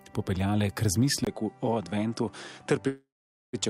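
At 1.25 s the input likely switched to a poorer device. After a 20 ms silence the sound turns duller, with nothing above 11.1 kHz, drops about 5 dB in level, and gains a new noise floor roughly 50 dB below the signal through to the end.

At 2.87 s a call audio freeze likely began, as delayed packets emptied the jitter buffer. The last sound is stretched into a fading fill, then about 480 ms of silence, before playback resumes at 3.55 s, with a 658 ms gap inserted and nothing lost.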